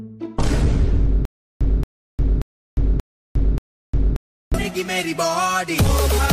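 From 1.25 to 4.54 s, a stutter with silent gaps: a 227 ms fragment repeats five times, each followed by 355 ms of digital silence, likely from a stalled stream.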